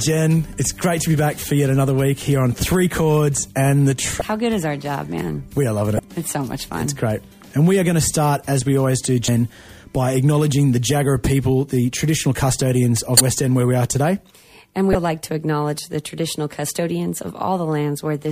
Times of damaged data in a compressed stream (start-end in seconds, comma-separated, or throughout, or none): 4.18-4.21, 5.96-5.99, 9.25-9.28, 13.17-13.20, 14.92-14.95